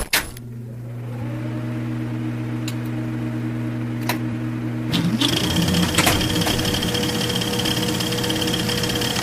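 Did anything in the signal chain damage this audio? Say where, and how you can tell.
Yes. At 8.64 s there is damaged data in a compressed stream, a fault at the codec decode stage. A brief, garbled blip lasting about 14 milliseconds breaks through the sound. Corrupted bytes in the coded stream made the decoder misread that stretch, output a nonsense frame and then resynchronise on the next valid header. A buffer underrun leaves a gap of silence or repeated audio instead. This event points to bad coded data rather than missing samples.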